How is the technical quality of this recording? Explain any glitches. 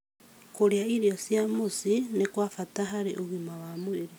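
A single glitch is audible in the speech: a repeated buffer at 2.89 s. New audio arrived late, so the device replayed its last block of about 5.8 ms once more, which fits a 256-sample buffer. That short repeat, with its hard joins, sounds like a brief click.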